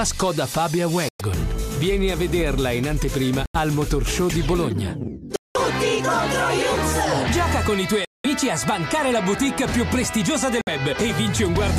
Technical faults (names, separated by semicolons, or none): Bluetooth stall